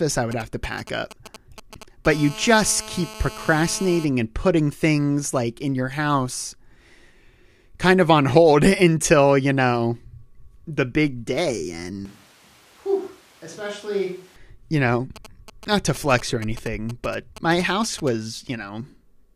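GSM signalling bursts run from 0.32 to 2.07 s. A nearby 2G phone's intermittent radio pulses are rectified into galloping ticks and short 217 Hz buzzes, roughly 15 dB below the speech. A GSM phone buzz follows from 2.10 to 4.05 s as the phone enters a call and pulses continuously, producing a hard, raspy 217 Hz buzz about 17 dB below the speech. From 12.05 to 14.36 s the speech abruptly turns roomy and hollow, roughly 10 dB quieter, with room noise around 25 dB under it, likely a switch to a distant microphone. The signalling bursts return from 15.16 to 18.09 s.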